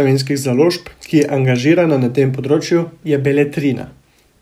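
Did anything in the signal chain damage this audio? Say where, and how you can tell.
No, nothing in the chain audibly damaged this speech.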